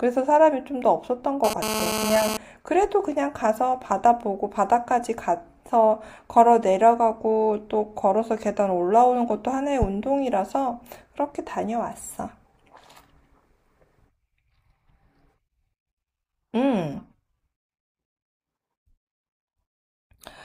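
From 1.44 to 2.37 s, the audio circuit rectifies radio bursts from a nearby 2G phone that is sending data, at 217 bursts per second. This GSM phone buzz is a harsh 217 Hz rasp full of harmonics, about 4 dB below the speech and unrelated to it.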